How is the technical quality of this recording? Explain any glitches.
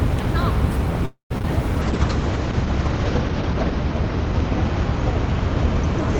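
The quality is compromised by three kinds of call-transmission glitch, all starting in the first two seconds.

Call audio freeze, 1.05 to 1.32 s: the sound stalls for about a quarter of a second. The last sound is stretched into a fading buzz or hiss, and about 0.12 s of that is silence, before the audio resumes where it left off with nothing lost. The likely cause is late packets draining the jitter buffer, which the receiver papered over. On a waveform it shows as a decaying tail and a flat gap. A spectrogram shows smeared, featureless energy dying out, then a clean restart.

Short concealed packet loss, at 1.38 to 1.42 s and again at 1.42 to 1.45 s: two back-to-back 20 ms chunks never reached the decoder. The receiver extended the preceding sound to cover each hole and crossfaded back in. This is heard as a quick smear or wobble. On a spectrogram there are two brief patches where detail blurs or repeats.

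Call bitrate drop, 1.82 s to the end: the encoder was starved of bits, which fits a fall from 32 kbps to about 8 kbps, bottoming out for about 1.4 s. Coding turns coarse and the bandwidth narrows from 20 kHz to 8 kHz, so the sound becomes muffled and rough. A spectrogram shows a hard ceiling near 8 kHz and blocky, watery texture below it. The waveform loses fine high-frequency detail.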